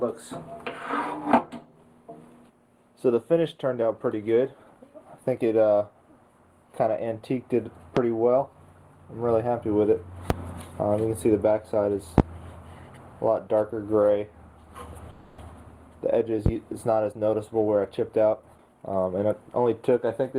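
At 7.97, 10.30 and 12.18 s, then again at 16.46 s, a single loud pop cuts through the sound, each about 20 dB above it (the third about 25 dB), likely from a voltage step such as a switch or static discharge.

From 15.10 to 15.39 s a call audio freeze holds the sound as a fading 280 ms buzz, likely packets stalled and the jitter buffer running dry; the audio then resumes with nothing lost.

Between 17.12 and 19.34 s a jitter buffer speed-up trims about 0.3 s of short pitch-period slices, so the sound runs at 113% speed without a pitch change, audibly hurried.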